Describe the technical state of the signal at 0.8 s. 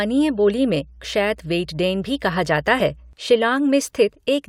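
At 0.8 s the speech sits over mains hum, which runs from the very start to 3.13 s. A ground loop or nearby transformer is leaking the 60 Hz power line into the signal, giving a steady low tone with some low harmonics, roughly 25 dB below the speech. Unlike rumble or handling noise, it holds a fixed pitch and constant level, indifferent to what the speech is doing.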